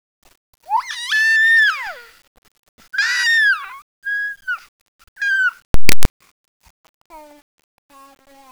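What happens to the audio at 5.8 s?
From 5.74 s to 6.05 s the audio breaks into a burst of very loud, harsh distortion, with the quiet parts of the sound pushed up to the same level as everything else. This is the sound of signed and unsigned mixed up, likely from the 8-bit samples being read with the wrong sign convention: the top bit flips, so every zero crossing turns into a jump across the full range.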